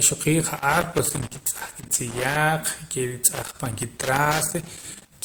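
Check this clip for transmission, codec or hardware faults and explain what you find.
Two faults are present: codec transcoding across the whole clip, and two bursts of connector crackle.

The transcoding runs throughout. The sound carries two layers of compression artefacts at once. The likely cause is transcoding between lossy codecs, pointing to MP3 at about 96 kbit/s re-encoded to Opus at about 32 kbit/s. Opus spends bits preserving MP3 smearing and adds its own. Nothing is present above 20.2 kHz.

Loose connector crackle occurs from 0.56 to 2.36 s and again from 3.32 to 5.12 s. Each burst lasts 1.8 s. A worn or dirty contact keeps making and breaking. This chops the signal into irregular crackle and scratching layered over the speech.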